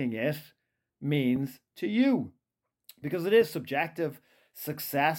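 At 1.36–1.38 s and again at 3.42–3.44 s, a single loud pop sits on top of the speech, peaking roughly 5 dB above it while the speech continues underneath. Each is a brief voltage spike, likely from a switch, static or a driver glitch.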